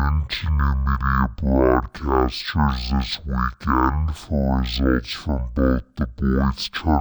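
Speech runs at half speed and a full octave low for the whole clip, the signature of stereo read as mono. The left and right samples of each frame are taken in turn as one channel, so every stereo frame becomes two consecutive mono samples and time stretches by two. A plain sample-rate mismatch at half rate would drop speed and pitch just as much, but it would not add the faint mirrored copy of the sound in the upper half of the spectrum that this fault produces.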